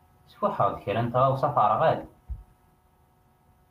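At about 0.69 to 0.71 s there's a lost packet rebuilt from error correction. One packet, by the sound of it, went missing, and the decoder filled the 20 ms using the low-bitrate backup copy carried in the next packet, so there's no gap, just a brief rougher, noisier patch in the speech.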